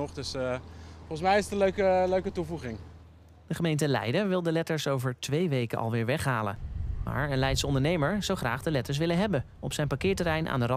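Nothing in the audio stood out as a technical problem on listening.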